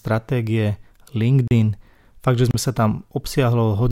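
Speech cut twice by a block of digital silence, at 1.48 to 1.51 s (34 ms) and 2.51 to 2.54 s (30 ms). Each is a short hole, pointing to an output buffer not filled in time. On a waveform each shows as a flat silent stretch, and on a spectrogram as a blank vertical strip.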